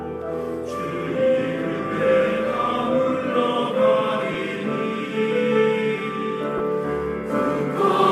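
Bluetooth LE Audio frames went missing twice, at 4.34 s and from 6.58 to 6.60 s, gaps of about 10 ms and 20 ms that fit one and two lost frames. The LC3 decoder filled each by repeating the last spectrum with scrambled signs, so each spot turns into a brief noisy smear.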